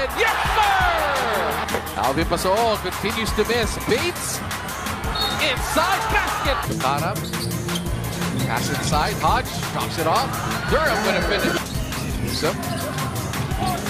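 Periodic USB or driver dropouts: the audio path stalls every 1.024 s, leaving roughly millisecond silent gaps heard as a few regular ticks from 11.06 to 13.11 s.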